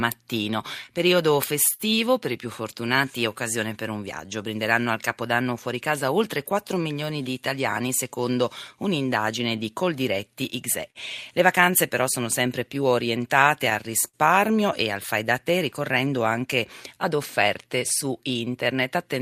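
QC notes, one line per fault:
Throughout: clock drift between sender and receiver. The audio has a faintly uneven pace, with small hiccups at irregular intervals. The sender's clock runs roughly 4% slow, so the jitter buffer keeps draining and the receiver must stretch the audio to keep playing.
0.51–18.74 s: repeated timing corrections. The speech drags slightly and unsteadily, at about 97% speed, with roughly half a second added overall. To offset the slow sender, the receiver keeps repeating short pieces, always lengthening, never shortening, at uneven spacing.
1.73–1.82 s: short stall from a late packet. One sound is held about 58 ms too long, with a slight buzz or dip before the audio resumes. A packet arrived late, the buffer ran empty, and the receiver stretched the last sound until it came.
8.72–14.16 s: scattered short gaps. About five brief ticks or smears are spread across this stretch, the longest around 50 ms, roughly 150 ms in total. 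Late or lost packets left small holes, each patched by continuing the preceding sound.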